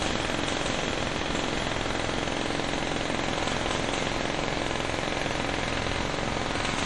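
Throughout the audio, the treble stops dead at 11.3 kHz and the remaining detail swirls watery, with chirpy transients and smeared attacks. That points likely to MP3 compression at a starved bitrate, around 48 kbps. A spectrogram shows a flat ceiling at 11.3 kHz and flickering holes below it.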